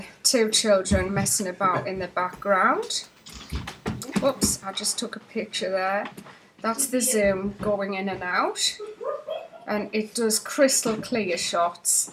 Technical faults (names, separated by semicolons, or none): USB whine